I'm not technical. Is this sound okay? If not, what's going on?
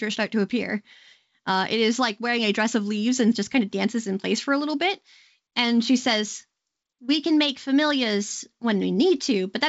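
Yes, this speech recording sounds okay, with nothing standing out as a problem when listening to it, just the slightly trimmed top end of a good-quality wideband phone call.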